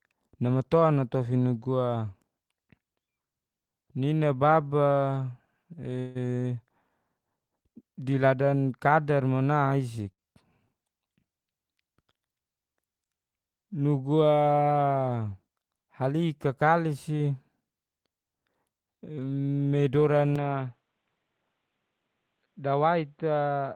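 From 5.99 to 6.17 s the sound stalls: about 158 ms of filler continues the last sound as a fading buzz or hiss, then the audio resumes exactly where it stopped, with nothing lost. This is a call audio freeze, likely from delayed packets draining the jitter buffer, adding 158 ms of delay.

At 10.12 to 10.21 s a burst of packet loss occurs. The receiver holds the last sound for about 54 ms, fading it, then jumps ahead. Roughly 60 ms of the original audio is gone.

Two jitter buffer speed-ups follow as the receiver works off excess buffered delay by cutting out short pitch-period pieces. From 11.96 to 12.21 s the sound runs at 116% speed, shedding around 50 ms. From 18.41 to 19.49 s it runs at 110%, shedding about 100 ms. Pitch stays put, but pacing sounds hurried.

At 20.36 s the sound abruptly turns dull and slightly quieter, with no gap at the change. Nothing above 4.3 kHz remains, the level drops about 5 dB, and a new noise floor sits roughly 50 dB down. 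The input was likely switched to a poorer device, which persists to the end.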